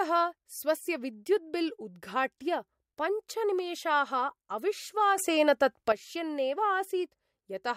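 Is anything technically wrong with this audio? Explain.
Yes. From 5.18 to 5.92 s the speech and the background noise leap up together by about 9 dB, then drop back. This sudden gain jump likely comes from a digital gain setting applied instantly, from one sample to the next, without any ramp.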